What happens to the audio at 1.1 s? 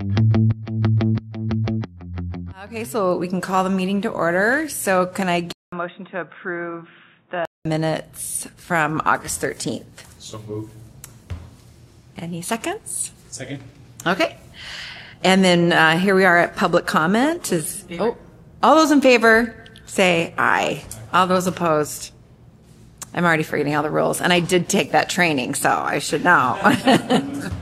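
Nothing goes wrong at 1.1 s; the audio runs through that moment intact, with no dropout, click or other fault.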